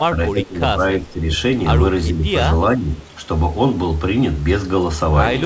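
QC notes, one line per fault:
0.00–0.79 s, 1.03–1.26 s, 2.09–2.24 s, 2.75–3.00 s, speech suppressed in double talk: the speech dips in patches, deepest (about 15 dB) at the start and shallower later. The likely cause is the echo canceller ducking its own talker. Unlike packet loss, this comes from the level being turned down, not from missing audio.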